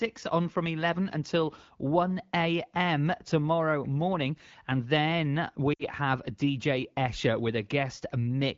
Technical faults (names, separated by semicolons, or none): lost AMR speech frames